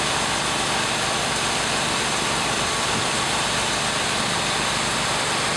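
No technical faults are audible anywhere in the clip.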